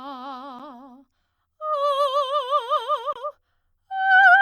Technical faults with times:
0.59 gap at a join of encoded pieces
3.13-3.16 gap at a join of encoded pieces

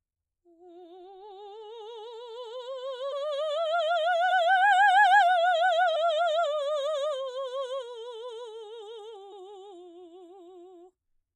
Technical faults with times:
3.11 compressed frames skipped
4.30 compressed frames skipped
5.95 compressed frames skipped
9.31 compressed frames skipped

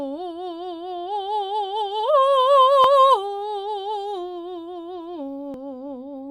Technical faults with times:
2.84 dropped buffer (overrun)
5.54 dropped buffer (overrun)

